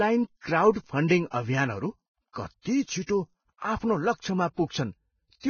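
From start to finish the speech is band-limited, with nothing above 6.6 kHz, and the remaining treble sounds hissy and grainy, with roughened tones and softened consonant attacks. This is likely heavy Vorbis compression, consistent with a low bitrate around 16 kbps that quantises upper detail into noise.

At 4.21 to 4.24 s a short hiss runs for about 30 ms ahead of a sharp onset, which then sounds smeared. This is pre-echo: quantisation noise sized for the loud attack has spread across the transform block into the quiet moment before it.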